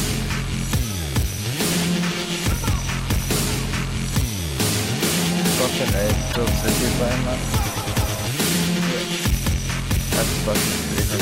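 Periodic USB or driver dropouts run from 0.63 to 3.42 s: around thirty regular ticks, one every 0.1 s, each a gap of roughly a millisecond of silence. A background task repeatedly stalls the driver or USB transfer, so a sliver of audio is lost each time. Damaged data in a compressed stream appears at 6.28 to 6.37 s as a brief blip. Corrupted bytes there make the decoder misread frames and lose sync until it finds the next frame header.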